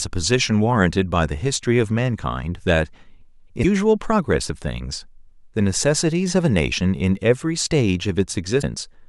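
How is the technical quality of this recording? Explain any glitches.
Two short glitches come from damaged data in a compressed stream, at 3.59–3.65 s and again at 8.58–8.64 s. Corrupted bytes in the encoded speech make the decoder misread the affected frames and lose its place, so it scans forward for the next valid frame header before resuming. Each event lasts about 50 ms and is heard as a brief chirp, squawk, click or short hole cutting into the speech.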